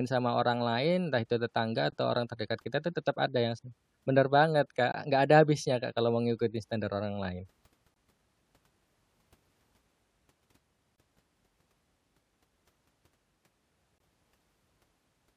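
At 4.92–4.94 s, between "yang se benar banget" and "nggak ada habisnya", then 7.94–7.96 s after "ngikutin standar orang lain", 10.96–10.98 s and 13.98–14.00 s, a gap between chunks cuts 20 ms holes into the speech every 3.0 s. Silence is inserted at each chunk join.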